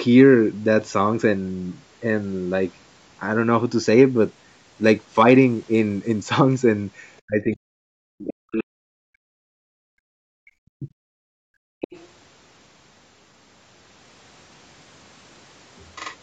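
Bluetooth SBC bit pool drop, 4.15 to 6.22 s: the speech turns dull and gritty as the link runs short of bits. The sound fits the bit pool falling from 31 to 13, around 94 kbps. The top sub-bands lose most of their bits and the rest are quantised coarsely. This treble loss sits on top of the call processing's normal ceiling, with nothing above 8 kHz.

Speech suppressed in double talk, 7.26 to 9.42 s and again 9.75 to 10.9 s: the speech sinks by as much as roughly 40 dB. The likely cause is the echo canceller clamping down because it could not tell the talker apart from loudspeaker echo while both sides spoke.

Background gated by the echo canceller, 11.18 to 11.81 s: the room sound falls away by about 38 dB for most of that interval, then comes back. The canceller pulled the microphone down hard while the loudspeaker was active and then let go.

Other side's voice leaking through, 11.81 to 12.06 s: a brief second voice appears at about 15 dB below the speech. 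This is likely residual far-end audio from the loudspeaker that the echo canceller failed to fully remove from the microphone signal.

Bluetooth SBC bit pool drop, 13.98 to 15.94 s: the same dull, gritty degradation returns, again consistent with the bit pool dropping from 31 to 13, around 94 kbps.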